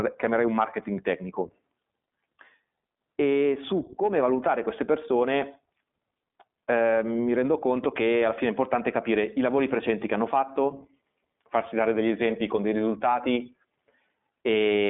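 Across the whole clip, the speech carries the sound of the iLBC codec. The band is cut to a telephone line of about 200 Hz to 3.6 kHz, and nothing passes above 3.8 kHz. Each short frame is coded on its own, which fits 20 ms frames at 15.2 kbps. The result is plainly rough and synthetic.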